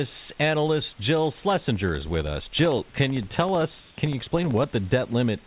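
Periodic USB or driver dropouts run through this speech recording from 1.44 s to 4.64 s: roughly fifty brief gaps, about a millisecond each, spaced every 64 ms. Each time, something on the bus or in the driver stalls the audio stream and the missing samples come back as silence, so the talker carries a steady train of ticks that only sound while speech is present. Comfort noise in place of the background appears from 3.80 s to 3.98 s. For about 180 ms the room's natural ambience, sitting about 31 dB below the loud speech, gives way to a smooth, featureless hiss at the same level. The likely cause is discontinuous transmission: the sender stopped sending during a pause and the receiver filled the gap with synthetic noise shaped to the background. Across the whole clip the call path leaves nothing above 4 kHz, which fits G.711 A-law.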